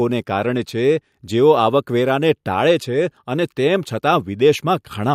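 No technical faults can be heard anywhere in the speech.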